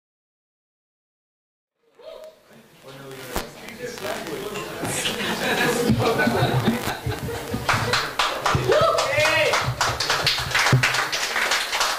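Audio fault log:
Nothing stood out on listening to this clip.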